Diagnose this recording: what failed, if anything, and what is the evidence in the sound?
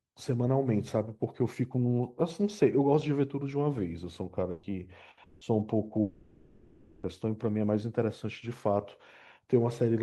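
At the network stage, two bursts of packet loss removed short runs of speech. At 4.51 to 4.66 s and 5.11 to 5.20 s the receiver stretched the last sound into a fading buzz or hiss for about 120 ms and 60 ms, then resumed further on, skipping that audio.

Longer gaps at 5.23 to 5.44 s and 6.01 to 7.06 s point to a long network dropout as the likely cause. Concealment fills each gap entirely, a held sound decaying for about 180 ms and then over a second, before speech returns with the intervening stretch gone.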